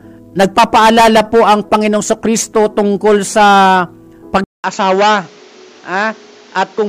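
At 4.44 s there's a 200 ms gap, and then everything to the end sounds duller and a bit quieter, with nothing above 7.6 kHz and a new noise floor sitting about 30 dB below the sound. That's most likely the input switched to a poorer device partway through.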